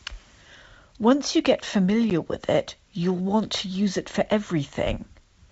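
At 2.10 s, packet loss on an ADPCM call drops about one packet, 10 ms, filled with silence. The decoder's adaptive predictor and step size lose sync with the sender's, so after the sharp-edged gap the speech returns slightly distorted, settling within tens of milliseconds.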